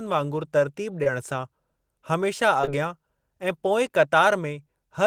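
Brief smears at 1.03 s and 2.62 to 2.69 s are short concealed packet loss: about 20 ms of speech at the first and about 40 ms at the second arrived too late, and the decoder extrapolated over each gap.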